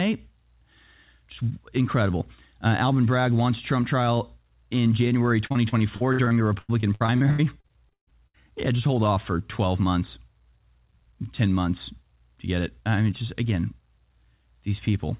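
From 5.46 to 8.42 s the speech turns choppy and robotic, breaking up twenty times, the longest gap 138 ms. This is repeated packet loss: packets kept going missing, and each hole was filled by stretching the last sound, patching 30% of that stretch.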